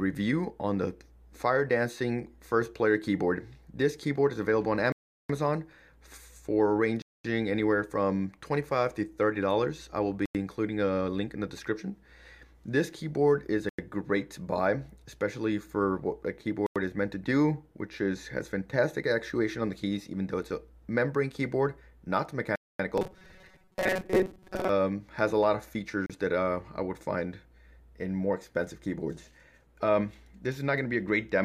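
Blocks of digital silence cut the audio out abruptly and bring it back without a fade at 4.92 to 5.29 s (about 0.37 s), 7.02 to 7.25 s, and for about 93 ms each at 10.26, 13.69 and 16.66 s, which fits a 4096-sample output buffer left unfilled; another follows at 22.56 to 22.79 s. From 22.98 to 24.69 s the sound turns into a rigid, metallic robotic buzz at 188 Hz, likely from repeated short buffers of about 5.3 ms standing in for most of the real audio. Unlike the silences, it is continuous. A last 34 ms block of silence follows at 26.06 s.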